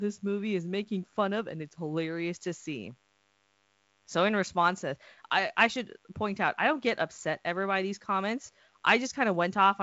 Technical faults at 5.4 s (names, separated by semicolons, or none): DECT cordless phone buzz